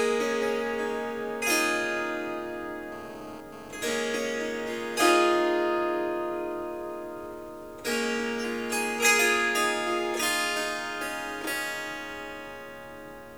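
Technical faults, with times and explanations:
2.92 to 3.94 s, GSM phone buzz: a nearby 2G phone sends a short burst of data, and the audio circuitry rectifies its radio pulses at about 217 Hz. The result is a hard, raspy buzz rich in harmonics, about 18 dB below the sound and unrelated to it.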